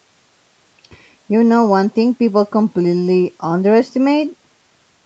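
No faults are audible in the speech; the call chain's band limit is plain, with nothing above 8 kHz, which fits a wideband Opus call path.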